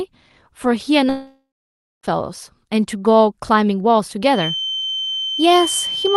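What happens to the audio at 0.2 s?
Nothing goes wrong at 0.2 s; the speech plays through that moment intact, with no dropout, click or distortion.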